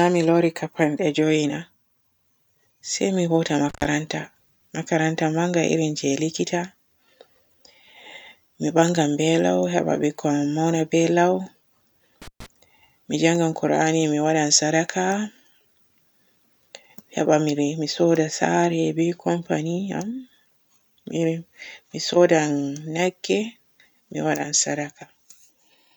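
At 3.69 s and 12.22 s, intermittent contact from a loose connection cuts the speech for 99 ms and 128 ms; edge crackle distinguishes it from clean digital dropouts.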